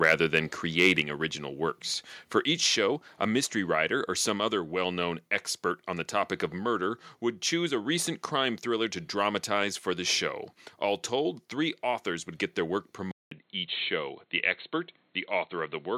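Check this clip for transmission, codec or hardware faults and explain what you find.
Three kinds of fault turn up in this speech clip, all near the very start except one near the end.

From 0.04 to 0.39 s and again from 0.79 to 1.0 s there's what sounds like microphone overload, likely from input gain set too high. Peaks push about 5 and 6 dB past the converter's limit and get flattened, giving the loudest syllables a harsh, crackly edge.

At 1.02 s the microphone volume steps down by about 4 dB in one go, likely the call software reacting to those clipped peaks. Speech and background both drop together, suddenly, right after the distortion.

At 13.11 s the input seems to switch to a poorer device, likely a different mic or a headset call profile. There's a 200 ms gap at the switch. From there to the end the band is narrower, so the speech turns dull and boxy at roughly the same loudness, over a faint new noise floor well below it.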